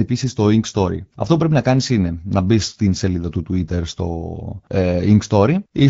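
Nothing is technically wrong with this speech recording; no faults can be heard anywhere in it.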